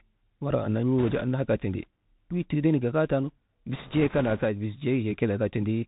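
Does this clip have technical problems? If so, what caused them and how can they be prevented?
Yes. The speech runs through a Bluetooth CVSD headset codec for its whole length, and the sound points to a 64 kbps link. CVSD sends one bit per sample saying only up or down, with an adapting step, so everything above 4 kHz is gone. S sounds come out scratchy, and loud high-pitched moments outrun the step and distort, over a granular hiss. On a spectrogram, energy stops flat at 4 kHz, with a grainy noise floor beneath. Prevention: switch the headset to a wideband mode such as mSBC or LC3, or record with a wired microphone.

Bit errors on a Bluetooth voice link appear from 0.99 to 1.22 s and again from 3.73 to 4.45 s, right after "wii tigibee nak gagaatanu". Roughly 3 percent of bits are flipped in the first stretch and about 2 percent in the second. Each CVSD bit carries only a small step, and its error fades quickly, so there are no loud clicks, only a rushing, crackly noise. 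On a spectrogram, noise smears across the band below 4 kHz during those spans, and the waveform shows fuzz rather than spikes. Prevention: keep the headset close to the receiver and away from Wi-Fi and other 2.4 GHz interference.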